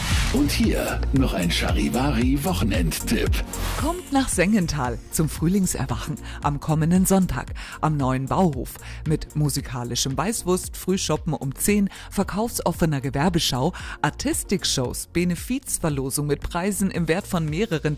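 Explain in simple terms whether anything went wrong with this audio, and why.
Nothing went wrong here.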